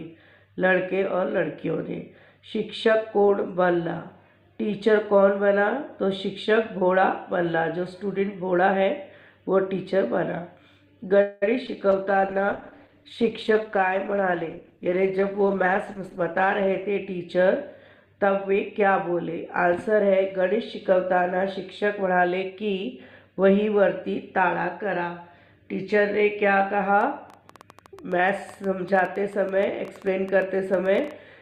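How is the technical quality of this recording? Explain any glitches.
The recording is compromised by several network-related call faults between 11 and 23 seconds, followed by a click train running to the end.

At 11.21–11.44 s there is a call audio freeze. Packets were likely delayed until the jitter buffer emptied, so the last sound is stretched into a fading buzz for about 200 ms. The audio then resumes without loss.

At 11.67–11.77 s there is short concealed packet loss. About 20 ms of audio never reached the decoder, and the receiver patched the hole by extrapolation. This is heard as a brief smear or wobble.

From 11.92 to 16.94 s there is a call bitrate drop. The encoder was pushed from 48 to 14 kbps, which makes the sound coarse, watery and dulled at the top end for about five seconds.

There are two jitter buffer speed-ups. The first, at 14.12–15.73 s, trims about 150 ms of excess buffered audio, so playback runs about 9% fast at unchanged pitch. 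The second, at 21.84–22.51 s, trims about 70 ms at about 8% fast, which briefly sounds hurried.

From 27.01 s to the end there is a train of clicks. Pulses, probably from interference or a faulty connection, arrive irregularly about eight times per second. Their peaks are about as loud as the audio itself.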